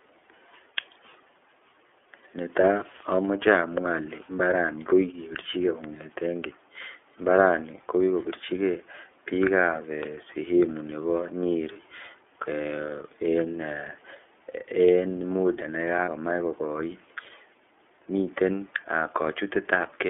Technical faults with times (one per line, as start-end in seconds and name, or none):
0.00-20.09 iLBC codec
11.72-11.77 lost iLBC frames
16.05-16.08 lost iLBC frames